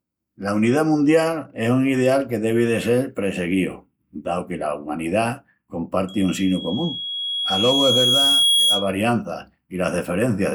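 From 6.08 to 8.92 s there's loudspeaker feedback squeal: the mic is catching its own speaker, and at 3.3 kHz the loop gain tips past one. You hear a thin tone swell over a few seconds until it's sitting a bit above the speech.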